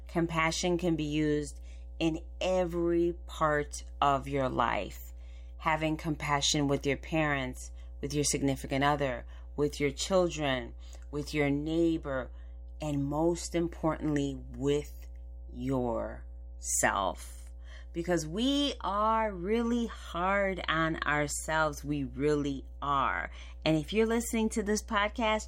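From start to finish a steady, low drone sits under the speech, a 60 Hz mains hum with a buzzy edge from its low harmonics, loud enough to be clearly audible at roughly 15 dB below the talker. It never changes with what is said, so it fills every pause. The power line has leaked into the signal path, most plausibly through a ground loop or a transformer close to the recording chain.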